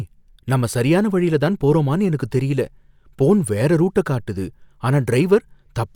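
No dropouts, distortion, timing errors or other technical faults can be heard anywhere in the recording.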